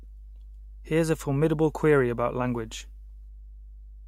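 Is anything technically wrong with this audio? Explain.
Yes. Mains hum runs through the whole speech clip, a steady low tone at 50 Hz sitting roughly 20 dB below the speech. Power-line current is leaking into the signal path, most plausibly through a ground loop or a transformer near the cabling, and it adds a constant buzz under every pause. On a spectrogram it shows as an unbroken horizontal line at 50 Hz with fainter lines at low multiples. The waveform shows a slow periodic ripple riding beneath the speech.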